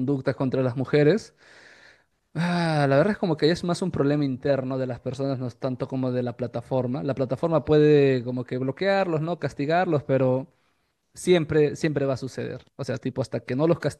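A speech recording, and nothing is technically wrong with it.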